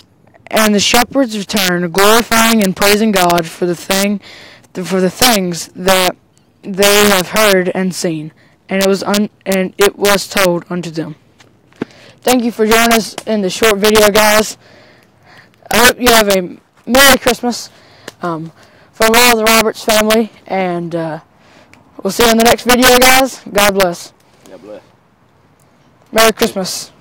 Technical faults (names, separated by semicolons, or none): integer overflow